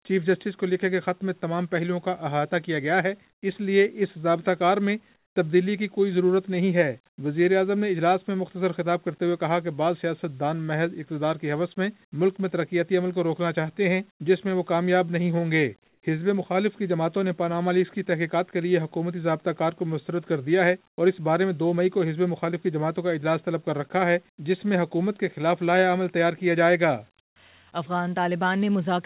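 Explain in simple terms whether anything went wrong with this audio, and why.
The call system most likely stopped sending audio during short quiet gaps and had the receiving end fill them with made-up hiss, which is called comfort noise in place of the background. This happens at 3.3–3.42, 5.16–5.36, 15.88–16.02 and 27.2–27.36 seconds. Each time, the real background is briefly swapped for a flat, featureless noise. It is clearly quieter at 3.3 and 27.2, slightly quieter at 5.16, and a little louder at 15.88.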